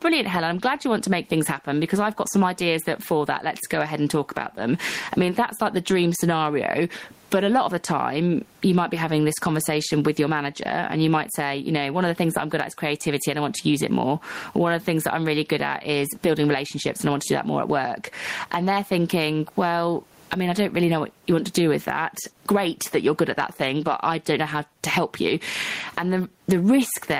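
Throughout, there is gain pumping. The microphone gain was likely set far too high, with a fast limiter clamping down on each loud syllable. Room noise sits about 45 dB below the speech, and the gain swings by around 20 dB, squashing the level.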